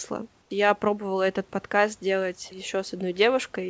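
At 0.42 to 0.50 s there's a short stretch of comfort noise in place of the background: for 80 ms the real room hiss gives way to a flat, featureless fill about 3 dB quieter. That's likely discontinuous transmission pausing in the gap while the receiver synthesises noise.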